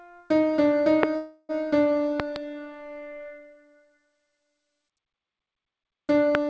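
At 1.03 s a loud pop cuts in, roughly 25 dB above the surrounding sound. It is a single sharp click, likely from a voltage spike such as a switch or driver glitch. The sound continues underneath.

From 1.16 to 1.52 s comes a call audio freeze. The jitter buffer ran dry, likely because packets were delayed. About 330 ms of fading buzz fills the gap. Nothing is lost, but everything after arrives 330 ms later.

From 2.20 to 2.38 s, two more pops land in quick succession at a similar level. A last, slightly softer pop hits at 6.35 s.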